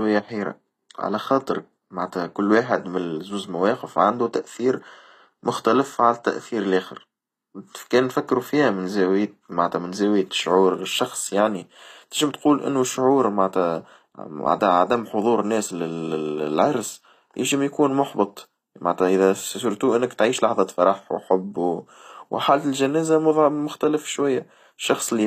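HE-AAC compression, likely the cause, runs throughout the speech, with nothing above 14.9 kHz. The treble reaches high but is not the original: the upper band has been rebuilt by copying lower bands upward and shaping them with a coarse envelope, so its harmonics fail to line up with those below the crossover. The damage is plainly audible, with gritty, lispy s sounds, which fits a low bitrate of around 24 kbps.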